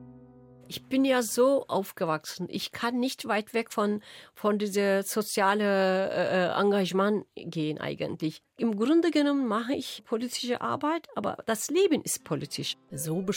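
No technical faults can be heard anywhere in this audio.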